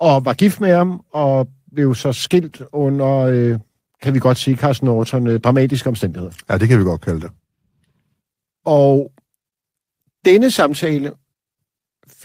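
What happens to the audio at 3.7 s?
Packets kept arriving late, so the jitter buffer ran dry about a dozen times between 2.49 and 3.83 s, a span that covers 3.7 s. The receiver extended the last sound through each gap of at most 15 ms. These repeated stalls (stutter) lose nothing, but the speech drags and hiccups.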